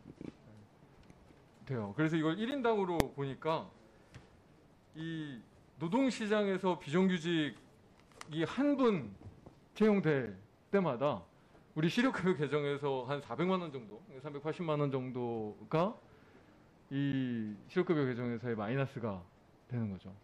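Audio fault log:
2.51 s, 10.26 s, 13.9 s and 17.12 s: block of digital silence. Each time the audio drops to silence for 10 ms and returns with no fade, which likely means the output buffer wasn't filled in time. The hard edges make a tick. Unlike a full-scale fault, the sound briefly vanishes rather than turning into a loud bang.
3.00 s: invalid numbers at full scale. For 0.73 ms, which fits a 32-sample block, the output sits flat at one extreme value, far beyond the audio's peaks, because a calculation produced infinite or invalid values. Because the block is so short, it is heard as one very loud bang, much harsher than the ticks of the silence gaps.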